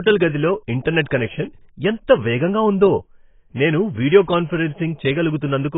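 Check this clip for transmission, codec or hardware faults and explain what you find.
One codec fault runs through the whole clip. The speech is dull and smeared, with nothing above 3.8 kHz. That heavy damage points to AAC compression, likely AAC-LC at about 16 kbps, which lowers the cut-off and leaves spectral holes.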